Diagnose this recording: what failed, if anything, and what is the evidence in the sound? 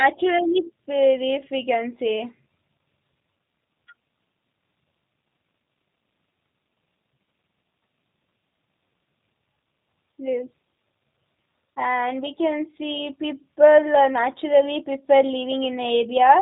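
The codec stage is the culprit here: the whole speech clip has gone through a G.729 codec, and it's plainly audible from start to finish. There's nothing above about 3.8 kHz, and the voice has that slightly rough, synthetic edge you get when speech is rebuilt from a vocal tract filter, a pitch predictor and a handful of pulses per frame. That rebuild is what you hear, and it fits an 8 kbit/s G.729A encode.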